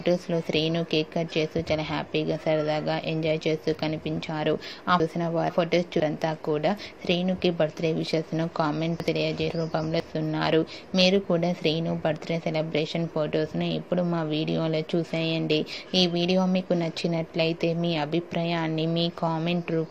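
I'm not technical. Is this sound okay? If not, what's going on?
No. At 5.0 to 6.0 seconds, and again at 9.0 to 10.0 seconds, the sound jumbles briefly. These are chunks out of order: two half-second pieces play in swapped order, the later one first. Nothing is missing or repeated, which distinguishes this from a dropout or a skip. The sound is simply shuffled, with abrupt joins where the pieces meet.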